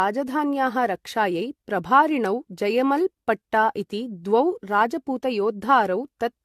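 From start to finish the speech sounds swirly and hollow, with smeared consonant attacks and nothing above 14 kHz. This is generation loss, likely from re-encoding about five times in a lossy codec consistent with AAC-LC at 64 kbit/s, each pass adding fresh quantisation damage.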